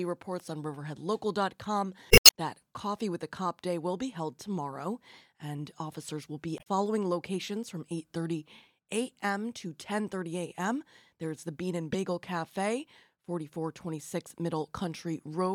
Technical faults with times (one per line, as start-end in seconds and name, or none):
2.08-2.31 damaged data in a compressed stream
6.55-6.67 damaged data in a compressed stream
11.93-11.95 damaged data in a compressed stream